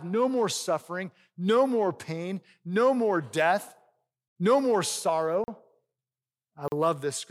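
Twice, at 5.44 and 6.68 s, a 40 ms block of samples drops to silence, a block of digital silence that cuts out abruptly and leaves a brief hole in the speech.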